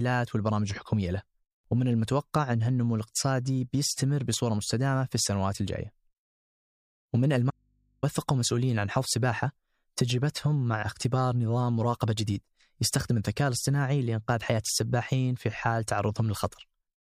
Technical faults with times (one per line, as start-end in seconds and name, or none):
7.50-8.03 audio dropout to a faint residue